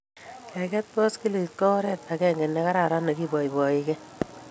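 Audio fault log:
No faults can be heard anywhere in the speech.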